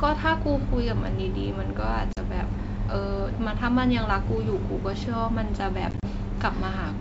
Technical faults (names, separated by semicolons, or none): packet loss on an ADPCM call